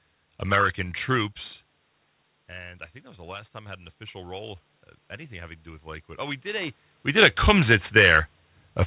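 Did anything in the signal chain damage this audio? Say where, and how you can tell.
Yes. Automatic gain rising occurs from 2.49 to 4.58 s and again from 5.28 to 7.43 s, in the call-processing stage. After the speech level at the microphone dropped by about 16 dB, the gain control treated the input as too quiet and raised its gain by about 5 dB over two seconds. Speech and room noise swell together, and only part of the lost level returns. The second rise adds about 4 dB over a similar span.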